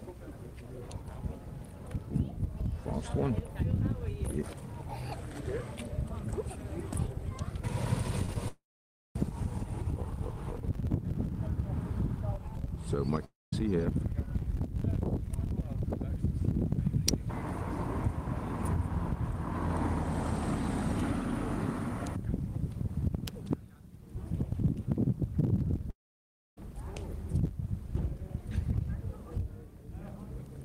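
From 5.13 to 7.49 s the audio slows by about 6.3% and drops roughly 113 cents, just over a semitone, then snaps back to normal speed. This is a drift correction step, likely a clock-matching resampler changing rate in one jump to manage its buffer.

At 8.25 to 8.29 s and again at 8.33 to 8.36 s, short concealed packet loss leaves brief smears. Each time about 20 ms of audio never arrived, and the decoder patched the hole by extending the preceding sound before blending back in.

Right after, from 8.48 to 9.16 s, a long network dropout takes out about 670 ms. The concealment buzz fades quickly into about 550 ms of silence, and the audio resumes with that stretch missing. The likely cause is an interruption in packet delivery.

The same drift correction step returns from 12.33 to 13.09 s, with the same 6.3% slowdown and the same drop of about 113 cents. A shorter dropout follows at 13.25 to 13.53 s, losing about 270 ms, of which roughly 200 ms plays as silence.

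Single sharp snaps at 17.09 s and 23.28 s are electrical switching spikes, likely arcs from a nearby switch or static discharge coupling into the line.

A final long network dropout runs from 25.90 to 26.58 s. About 670 ms is lost there, and around 620 ms of it is heard as silence after the fading fill.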